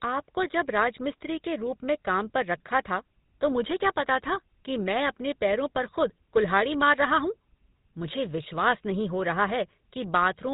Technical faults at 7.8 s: GSM full-rate codec

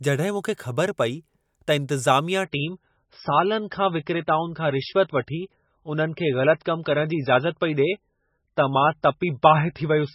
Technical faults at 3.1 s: adaptive stream at a lower bitrate

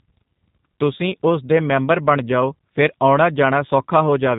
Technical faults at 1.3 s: G.729 codec

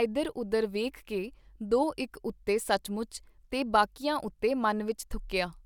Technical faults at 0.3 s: none

